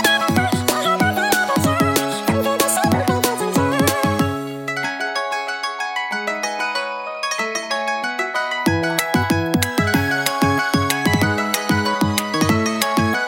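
The playback read the audio two samples at a time, treating each pair as a single frame, as if the stream were stereo or twice the sample width. From start to finish the sound runs at double speed, a full octave (12 semitones) high.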